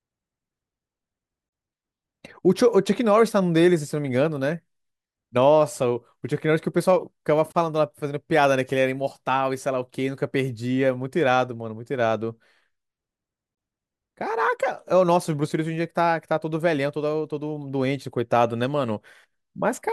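Speech breaks off three times, about every 6 s, with a gap at a join of encoded pieces: 1.49 to 1.52 s (about 35 ms), 7.52 to 7.55 s and 13.55 to 13.57 s (24 ms each). Separately encoded segments were spliced without trimming the encoder's start delay and end padding. Each gap is a brief dropout that resumes mid-flow. On a spectrogram it is a blank vertical strip, and on a waveform a flat, slightly smeared notch.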